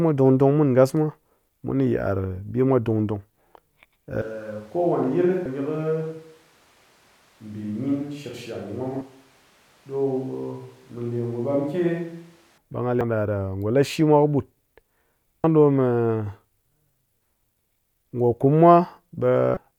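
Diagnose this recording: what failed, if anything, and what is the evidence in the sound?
From 4.22 s to 12.58 s the speech suddenly turns roomy and hollow, about 10 dB quieter, with room noise only about 30 dB below it. This is likely a switch to a distant microphone after the close feed dropped. On a spectrogram, the bass thins and the noise floor rises. The waveform envelope shrinks abruptly.

Damaged data in a compressed stream, at the codec or storage stage, causes brief glitches at 5.46, 9.01, 13.01 and 15.44 s and a longer one from 19.54 to 19.57 s. The decoder misreads the corrupt frames, then resyncs. These show as thin broadband vertical streaks and small waveform discontinuities.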